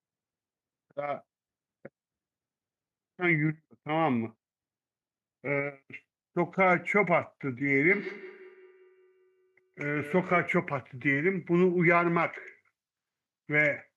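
Speech clip with a feedback echo between two devices from 7.9 to 10.59 s: each sound returns roughly every 150 ms, thinning and ringing, peaking about 16 dB below the voice.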